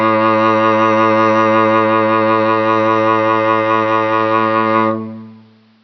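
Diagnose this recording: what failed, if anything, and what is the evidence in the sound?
Listening to the music, nothing stood out that would point to a failure at any stage of the chain.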